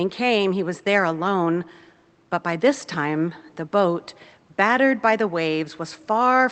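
Nothing in the speech stood out as a technical fault on listening.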